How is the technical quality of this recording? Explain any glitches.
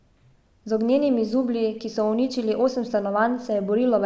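No glitches can be heard anywhere in the recording. The speech runs without any interruption, dropout or other fault that would need explaining.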